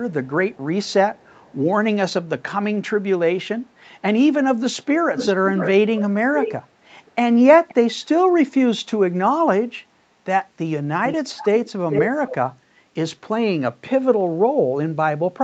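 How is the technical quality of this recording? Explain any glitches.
The speech is marred by recurring echo. Echo leak at 0.09–1.55, 5.15–6.53, 7.06–7.12, 7.68–8.05, 11.06–11.57 and 11.91–12.36 s: likely a loudspeaker's echo canceller letting audio return, delayed by 367, 527 and 440 ms, ranging from barely audible to as loud as the speech.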